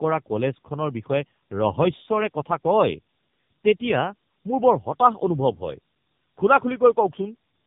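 Throughout, tandem speech coding roughens and muffles the speech. The warbly, smeared texture points to two low-rate AMR-NB passes with a G.711 hop between them, each re-coding the previous one's damage. A spectrogram shows nothing above 3.7 kHz and blurred harmonics.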